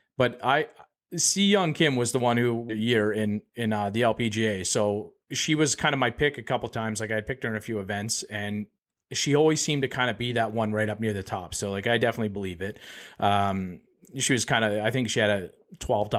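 At 2.69 s a stretch of audio was dropped while later audio was already waiting, causing a skip ahead: about 0.7 s of speech vanishes, and the two sides join with no gap. From 2.79 to 3.75 s, a jitter buffer speed-up trims short pitch-period pieces to reduce the excess delay, so speech runs at about 111% at unchanged pitch and sounds hurried.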